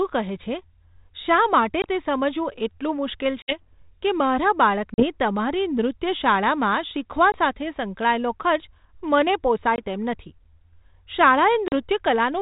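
Packet loss on an ADPCM call cuts hard-edged holes into the speech at 1.82, 3.42, 4.94, 7.32, 9.76 and 11.68 s. Each hole is 20 to 60 ms, the longest at 3.42 s after "સમજવું એટલું મુશ્કેલ". Unlike a plain dropout, the sound does not resume cleanly. The decoder's adaptive predictor and step size have lost track of the sender's, so the speech returns slightly distorted. It then settles over some tens of milliseconds.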